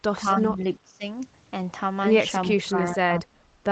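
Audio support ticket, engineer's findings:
Speech suppressed in double talk, 0.16 to 1.04 s and 2.5 to 3.39 s. Level dips in chunks, deepest about 20 dB then about 25 dB, roughly half a second and most of a second affected. Likely the echo canceller: far end talking over us, it can't tell our talker from its own loudspeaker echo and ducks everything. Worth checking AEC double-talk handling. Opus path tops out near 8 kHz, fits a narrowish wideband setting.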